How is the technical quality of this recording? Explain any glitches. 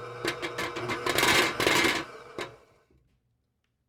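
No glitches or technical faults turn up anywhere in the recording, so there is nothing to explain.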